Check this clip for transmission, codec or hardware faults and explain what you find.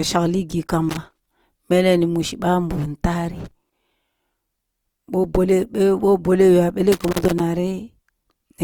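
Two faults stand out: codec damage throughout the speech and three bursts of loose connector crackle.

From start to finish, the speech carries the grainy, rough texture of Opus compression, likely in its music (CELT) mode at a low rate; the damage is plainly audible and fits roughly 24 kbps. The encoder keeps the energy of each band, and where bits run short it fills the missing detail with folded copies of lower bands or with noise. That makes the speech sound gritty rather than swirly. Unlike MP3, there are few watery holes and less warbling, and because the audio keeps its full bandwidth, up to about 20.2 kHz, there is no muffled, narrowed quality either.

Loose connector crackle breaks in at 0.89 to 1.33 s, 3.41 to 3.73 s and 6.92 to 7.40 s. In each burst a dirty or worn contact makes and breaks the connection rapidly, chopping the signal. The result is an irregular scratchy crackle lasting a few tenths of a second. 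Codec grain is steady and tied to the speech. This crackle comes in distinct, erratic clusters and then stops, much like a cable being jostled.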